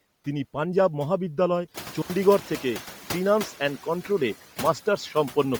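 From the start, the background pumps with the speech, dipping in the gaps and swelling under each phrase. Once the room noise rises by about 18 dB at around 1.5 s, it sits about 18 dB below the speech. These are noise suppressor artifacts: the suppressor pulls down only about 6 dB, frame by frame.

Throughout the clip, the speech carries a grainy, breathy fizz in the upper range, and the codec damage is heavy even though the band reaches up to about 20.2 kHz. The likely cause is Bluetooth LC3 compression at a low bitrate, which fits 32 kbps with 10 ms frames, filling zeroed high bands with noise.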